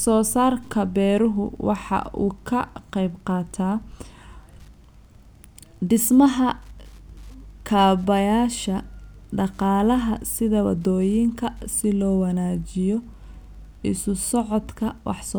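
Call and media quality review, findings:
Wi-Fi interference throughout: faint, steady ticking every 102.4 ms, well under the speech. A nearby radio's beacons are getting rectified in the audio circuit, so check placement and shielding.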